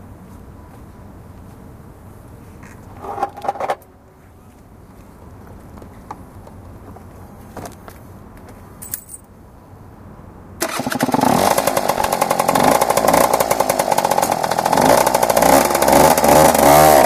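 From 11.94 to 12.14 s, loose connector crackle: a dirty contact chops the signal, showing as jagged waveform dropouts and broadband vertical streaks on a spectrogram.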